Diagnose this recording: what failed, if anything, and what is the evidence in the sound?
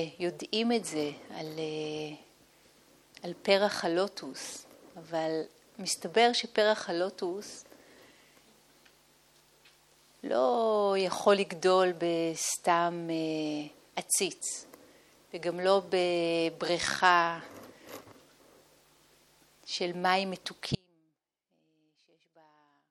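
An audio dropout to a faint residue begins abruptly at 20.75 s and runs to the end of the clip, about 2.2 s in all. The signal collapses mid-flow to a faint leak roughly 30 dB below its normal level, and the path stays live rather than falling to digital silence. That points to the analogue wiring, likely an intermittent connector or cable breaking contact. The hard edge rules out a deliberate pause or a fade-out.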